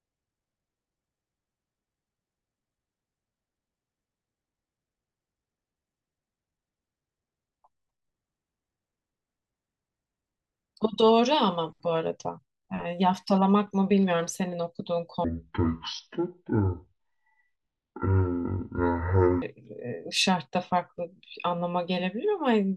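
From 15.24 to 19.42 s the speech drops to half speed and a full octave low: a case of stereo read as mono, with left and right samples strung together as one channel.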